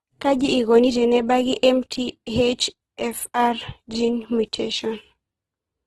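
Throughout the speech, Opus compression in its music (CELT) mode is the likely cause of rough, grainy texture: band energies survive, but gaps are filled with noise, consistent with a bitrate near 12 kbps. A spectrogram shows a hard ceiling at 12.4 kHz and speckled, noisy highs.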